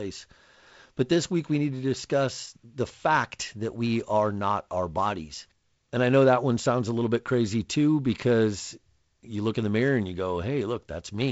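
No technical faults can be heard in this speech.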